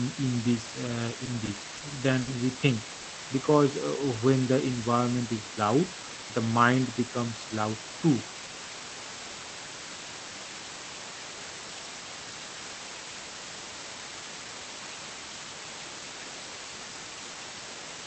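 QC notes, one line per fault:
Throughout: low bit depth with dither. A steady, even hiss sits under all of the speech. It is very loud, roughly as strong as the speech itself. The level of noise fits a signal kept to about 5 bits. Dither was added before rounding, so the rounding error turns into flat white noise instead of grainy distortion. The hiss does not follow the speech. It stays the same in pauses and in loud parts.
1.25–1.29 s, 1.45–1.49 s, 1.77–1.83 s, 2.21–2.29 s, 2.95–3.06 s: short stall from a late packet. Each time, the sound is held too long, with a slight buzz or dip. The holds last 20, 20, 40, 60 and 90 ms, so they grow longer across the run. A packet came late and the jitter buffer ran dry. The receiver stretched the last sound until it arrived, then resumed where it stopped. Nothing is lost, but each stall adds delay.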